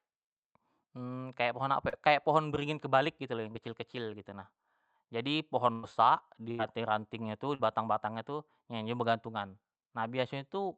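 A brief smear in the speech at 1.89 to 1.95 s, a tiny wobble at 3.53 to 3.56 s, and another smear at 7.55 to 7.61 s are each short concealed packet loss. Small pieces of the call, about 40, 20 and 40 ms, arrived too late for the decoder. The receiver filled each hole by extending the sound just before it, for roughly 33, 18 and 43 ms, then blended back into the real audio.

Two longer dropouts sit between the second and third of these. At 5.72 to 5.85 s and again at 6.51 to 6.61 s the sound turns into a held, fading buzz or hiss before the speech resumes further along, with something skipped in between. This is a burst of packet loss. About 100 ms and then 80 ms went missing in a row, and the receiver stretched the last sound across each gap, about 105 and 76 ms of fill, turning it down as it went. All of this sits on a call-codec signal whose top end stops near 8 kHz, which fits Opus.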